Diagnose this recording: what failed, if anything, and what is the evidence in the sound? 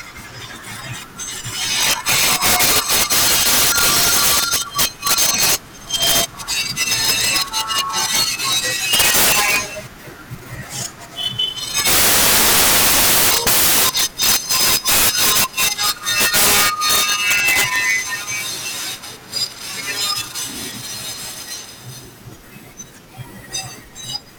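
Integer overflow runs throughout this speech, at the sample-format conversion stage. The signal was driven about 25 dB past full scale, and a few percent of samples wrapped to the opposite sign instead of clamping, so every loud peak snaps into a harsh crack far sharper than clipping.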